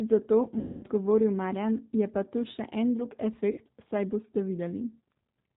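Throughout the clip, the speech carries plainly audible G.729 codec damage. It sounds like low-rate 8 kbit/s coding, with nothing above 4 kHz and a rough, slightly synthetic texture. The voice is rebuilt from a vocal tract filter, a pitch predictor and sparse pulses rather than the original waveform.

From 0.59 to 0.85 s, VoIP packet loss concealed by the speech codec replaces about 240 ms of audio. The decoder stretches its last pitch and filter into a buzzy tone or coloured noise that fades. A shorter 60 ms gap at 3.51–3.60 s, between "tu še en drug" and "saj boste", leaves the sound weak and distorted briefly afterward.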